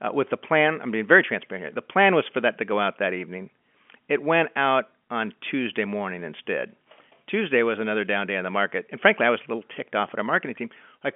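No faults can be heard in the speech: it carries the ordinary band of a G.711 telephone line, with content between about 200 Hz and 3.4 kHz and nothing above roughly 3.7 kHz, just as that coding shapes a signal.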